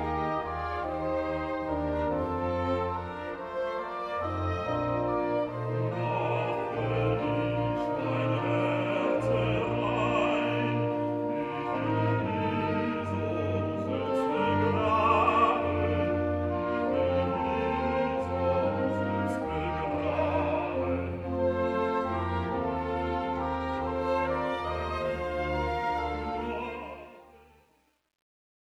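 From 26.41 s to the end at 28.73 s, the closing fade-out carries truncation distortion. The gain stage producing the fade appears to quantise without dither, at a resolution that fits roughly 10 bits, so as the level drops the waveform collapses onto a few coarse steps. Between 27.02 s and 28.74 s the tail turns gritty.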